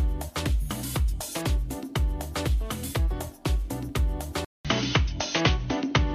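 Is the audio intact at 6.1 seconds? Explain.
No. From 4.45 s to the end of the clip, the system likely switched its input to a poorer device, such as a different microphone or a headset's call profile. After a gap of about 0.2 s of silence at the switch, the band is cut off near 6.4 kHz, so the sound turns dull and boxy. A faint new background noise sits well below the signal, while the overall level stays roughly the same.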